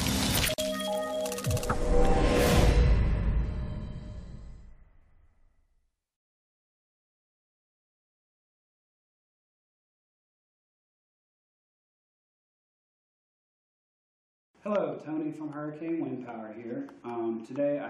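At 0.54 s the sound drops out for about 44 ms, until 0.58 s, then picks up exactly where it stopped. The gap recurs every 10 s. It is a gap at a join of encoded pieces: separately encoded segments were butted together with the encoder's start-up delay and final-frame padding left in, so silence sits in the seam. It sounds like a brief hiccup. On a waveform it appears as a flat strip with tapered edges. A spectrogram shows a narrow blank vertical band, its borders slightly blurred by the codec.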